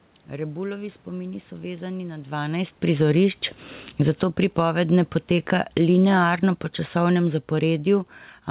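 Automatic gain falling first appears from 2.39 to 3.24 s, shortly after the talker shifts position around 2 s. The gain control judges the input too loud and lowers its gain by about 6 dB over most of a second, so the speech and the room noise behind it sink together rather than the voice alone fading. The same gain falling returns from 3.85 to 4.71 s, the deepest dip at about 7 dB, then from 5.26 to 6.12 s and from 6.95 to 8.2 s, each about 3 dB. These repeated slow pulls make the level drift downward in steps across the clip.

Automatic gain rising overlaps the first dip, running from 3.14 to 3.57 s. The control now reads the input as too quiet and raises its gain by about 4 dB, so voice and background swell up together over less than half a second before the next fall begins. Throughout, the audio carries nothing above about 4 kHz, which fits a G.711 mu-law call path.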